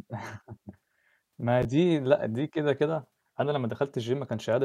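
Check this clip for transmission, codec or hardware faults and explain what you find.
One transmission fault: a pair of chunks played in the wrong order in this speech clip.

Chunks out of order, from 1.63 to 1.65 s: one chunk of about 11.6 ms arrived one chunk late and played after its successor. Nothing is missing, but the swap creates three hard joins, heard as a brief jumbled flicker. On a waveform the cycles jump abruptly at each join.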